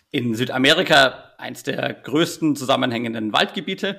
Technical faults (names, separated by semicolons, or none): hard clipping